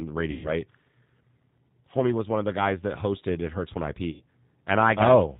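Speech carried over a G.729 codec link. Its low-rate model, which fits 8 kbit/s, strips everything above 4 kHz and leaves the voice plainly rough and synthetic. VoIP packet loss concealed by the speech codec strikes at 0.31 to 0.52 s and 4.11 to 4.21 s, gaps pointing to about 130 ms and 90 ms of lost frames. The decoder stretches the preceding sound into a fading buzzy tone or coloured noise, and the speech stays weakened briefly afterwards.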